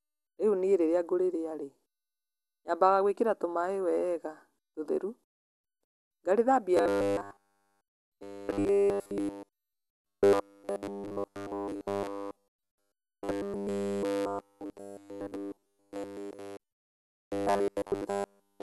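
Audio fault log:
throughout, MP2 compression: dull, gurgling sound with nothing above 12.1 kHz, likely from upper sub-bands being switched off at a low bitrate, around 80 kbps.
6.77 to 18.63 s, robotic sound from repeated short buffers: a rigid 100 Hz buzz, likely from every 10 ms block being repeated while new audio is skipped.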